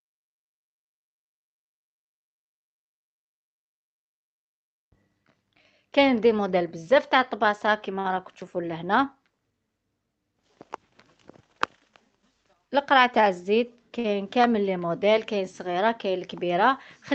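At 7.99 to 8.07 s there is a short stall from a late packet. The jitter buffer ran dry, so the last sound was held for about 52 ms, with a slight buzz or dip, before playback resumed at the same point. Nothing is skipped. The sound simply hangs briefly in place.

From 12.23 to 12.69 s a jitter buffer speed-up trims tiny pitch-period slices, about 50 ms in all, to reduce surplus delay. The audio runs at 111% speed while the pitch stays the same, so it sounds briefly hurried rather than frozen.

At 13.99 to 14.06 s the same late-packet stall recurs, holding the sound for about 55 ms.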